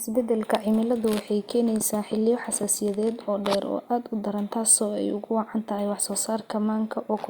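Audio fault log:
No faults are audible anywhere in the recording.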